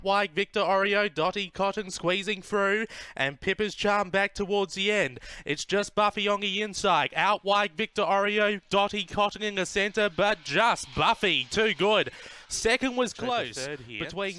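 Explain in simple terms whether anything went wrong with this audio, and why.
Nothing went wrong with this audio. Listening closely, there is no point where the sound behaves in a way that suggests a technical problem.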